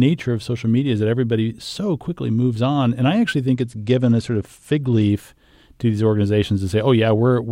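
Just after "I actually", from 3.55 to 5.10 s, the speech goes dull and gritty in a Bluetooth SBC bit pool drop. The encoder starved the upper sub-bands and quantised the rest coarsely, consistent with the bit pool falling from about 31 to 13, near 94 kbps.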